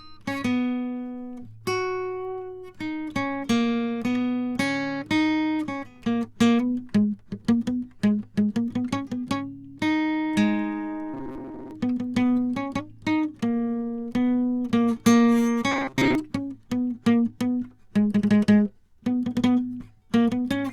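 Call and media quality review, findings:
Robotic sound from repeated short buffers, 11.14–11.71 s and 15.72–16.15 s. Rigid metallic buzz near 133 Hz over the music. Likely cause: playback buffer underrun repeating roughly 7.5 ms chunks, about half the audio. Fixed pitch distinguishes it from concealment fades.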